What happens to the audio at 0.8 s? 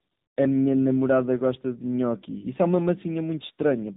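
At 0.8 s the speech carries tandem speech coding, present throughout the clip. The sound has passed through successive codecs, each re-encoding the last one's degraded output. That fits a chain like CVSD, then G.711 A-law, then AMR-NB near 8 kbit/s. The damage compounds. The speech sounds rough, muffled and warbly. Nothing is heard above 3.8 kHz.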